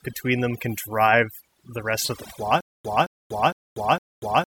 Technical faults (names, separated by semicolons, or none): overdone noise removal; stutter with silent gaps